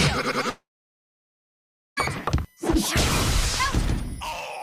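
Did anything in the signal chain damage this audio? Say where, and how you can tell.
Yes, two problems. There's a USB whine running through the whole clip: a fixed tone built on 1 kHz, loudest at its 2 kHz harmonic, sitting about 35 dB under the audio. That's the bus's 1 ms frame timing leaking into the analogue side through shared power or ground.

The second is a long network dropout from 0.49 to 1.99 s, likely a stall in the network stage. The receiver smears the last sound into a brief fading buzz, then holds silence for about 1.34 s. The audio resumes afterwards with roughly 1.5 s missing.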